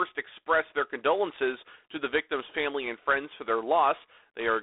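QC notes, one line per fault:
Throughout, G.726 ADPCM: a rasping hiss rises and falls with the speech level, which fits 24 kbit/s coding. Nothing passes above 3.8 kHz.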